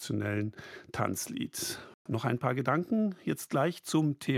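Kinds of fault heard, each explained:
Bluetooth dropout: The speech cuts to silence from 1.94 s to 2.06 s, a hole of about 116 ms with abrupt edges or a fade of a few milliseconds. When the sound returns it has moved on in time rather than picking up where it stopped, so that stretch is simply missing. This points to a wireless link where audio packets likely arrived too late for playback and were discarded. A gap of this length fits roughly five lost packets in a row.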